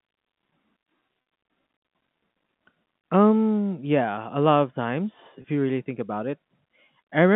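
At 1.22 to 1.26 s, then 5.42 to 5.44 s between "a lot of times" and "you really think about", there's packet loss with pitch repetition. The receiver loops the last pitch period over the 40 ms and 20 ms gaps, so each sounds briefly held and buzzy.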